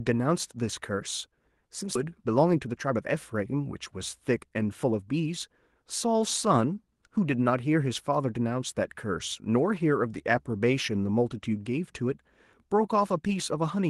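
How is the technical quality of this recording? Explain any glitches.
Two glitches stand out, both early in the speech and both from the call's delivery path. The sound comes through a band-limited call codec with a top end around 12 kHz, consistent with Opus at something like 24 kbps.

First, at 1.95 to 1.97 s there's a skip ahead. Roughly a second of audio got dropped, either lost in transit or thrown out when the buffer overflowed, so playback leaps forward with basically no gap and the two sides butt straight together.

Then from 2.05 to 5.28 s you get a jitter buffer speed-up. The buffer had piled up more audio than it wanted, so it kept trimming tiny pitch-period slices, about 300 ms in total. Speech runs roughly 10% fast at unchanged pitch and sounds a bit rushed.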